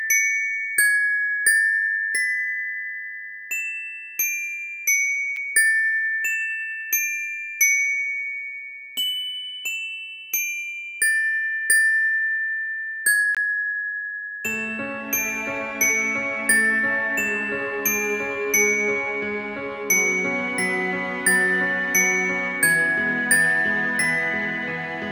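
The audio has two blocks of digital silence: a 6.85 ms one at 5.36 s, heard as a tick, and a 20 ms one from 13.35 to 13.37 s, a brief hole. Unlike a level dropout, the sound falls to silence and back with no fade, as when the output buffer isn't filled in time.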